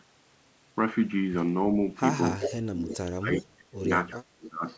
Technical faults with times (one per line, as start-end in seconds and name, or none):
2.37-3.85 speech suppressed in double talk
2.45-2.55 echo leak
2.87-2.97 echo leak
3.33-3.42 echo leak
4.08-4.19 echo leak
4.19-4.65 speech suppressed in double talk
4.68-4.77 echo leak